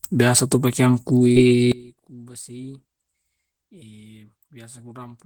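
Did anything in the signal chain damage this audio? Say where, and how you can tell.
Yes. At the network stage, short concealed packet loss hits at 1.31 to 1.37 s. About 40 ms of speech arrived too late. The decoder filled the gap by extending the preceding sound, then crossfaded back. It heard as a brief smear.

From 1.72 s to the end, the speech drops by about 24 dB. That is one channel inverted, likely a polarity swap in the analogue wiring. Summed to mono, the shared centre content cancels, leaving only the faint difference between channels.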